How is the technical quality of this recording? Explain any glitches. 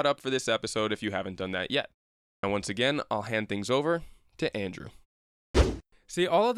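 The recording has a clipped start after a pause, twice. At 2.38 s, after "haven't done that yet", about 53 ms is lost before "once again I'll hand". At 5.50 s, about 45 ms vanishes. Each follows roughly half a second of silence. The output device sleeps during the gap and wakes late. Words begin abruptly, missing their first sounds.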